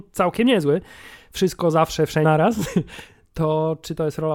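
At 2.24 s, after "całkiem niezły wszystko zawsze", damaged data in the compressed stream makes the decoder lose sync: a brief glitch, seen as a thin vertical mark.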